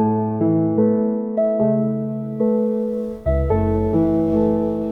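No audible technical faults turn up anywhere in the recording.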